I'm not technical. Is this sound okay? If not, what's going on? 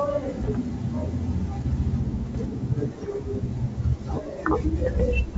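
No. There are three short rough patches, at 0.38 to 0.50 s, 2.23 to 2.38 s and 4.86 to 5.04 s, where the speech pops and crackles with quick jumps in loudness. That's bit errors on an ADPCM link. A small fraction of the digital data got scrambled in transit, and because this kind of coding builds each moment on the one before, each glitch smears into a brief harsh burst instead of a single click.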